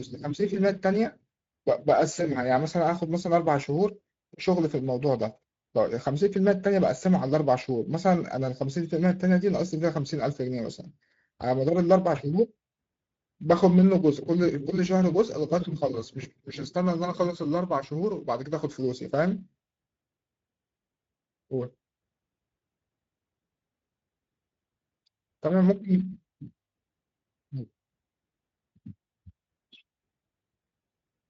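Speex codec damage runs through the whole clip, from start to finish. Speex is a CELP speech coder that rebuilds speech from a predicted excitation, and here too few bits reach that excitation, so the speech sounds plainly rough, grainy and hoarse. The damage points to a middle Speex setting of roughly 17 kbps. The coder's wideband limit also removes everything above 7.7 kHz, which leaves a dull top end.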